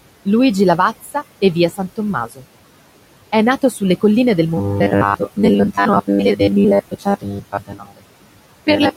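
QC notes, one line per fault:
Throughout: noise suppressor artifacts. The background is pulled down by about 18 dB between phrases and rises under them, leaving a residue distinct from the steady room noise about 19 dB below speech.
1.02–1.15 s, 2.27–2.43 s, 6.91–8.04 s: speech cut by the noise suppressor. Speech, just before "e via" in the first case, is mistaken for noise and ducked by about 10, 15 and 19 dB. It sounds swallowed rather than buzzy.
4.57–8.96 s: robotic sound from repeated short buffers. After "nato sulle colline del", a rigid metallic buzz at 100 Hz replaces roughly 70 percent of the sound, likely from a 10 ms buffer repeated while real audio is skipped.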